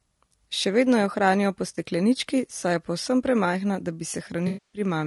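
Speech that sounds rough and grainy throughout, with a hiss between the voice's harmonics and a thin, synthetic top band, which is likely low-delay AAC compression (AAC-ELD) at a low rate, consistent with about 32 kbps. Its very short frames resolve pitch harmonics coarsely and leave noise filling the gaps. Two dropouts are AAC frame loss with concealment, where the decoder rebuilds missing audio from the last good spectrum. After "vedno jo hranijo po" there is a brief smeared, noisy blip at 1.75 s. After "je povsem premajhna da" a longer 260 ms gap from 4.47 to 4.81 s sounds like the concealed spectrum decaying away before the audio fades back in, which fits a run of thirteen consecutive lost frames.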